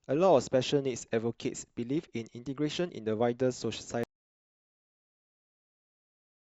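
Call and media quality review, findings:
Audio dropout to silence, 4.04 s to end: speech cuts mid-flow to silence, no room tone. Likely lost input link.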